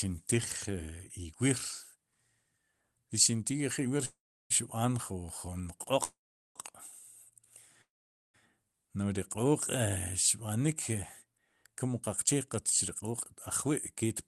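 A speech clip with three call audio freezes, at 4.05 to 4.52 s, 6.04 to 6.57 s and 7.81 to 8.36 s. At each one the last sound stretches into a brief fading buzz and then drops to silence for roughly 0.33, 0.41 and 0.48 s. The speech then resumes exactly where it stopped, with nothing lost, so each stall adds about half a second of delay. The likely cause is packets held up in transit, letting the jitter buffer run dry. Over the call codec, audio content reaches up to about 12 kHz.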